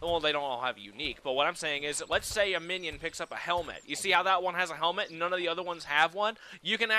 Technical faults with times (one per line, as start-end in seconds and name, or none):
none